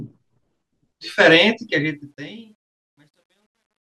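From 1.6 s to the end, the speech fade-out, which starts around 1.6 s, shows truncation distortion on a fade. The level stage drops low bits without dither, consistent with an 11-bit path, so the decaying waveform collapses into coarse steps. It turns gritty, worst from 2.52 s to 4.0 s.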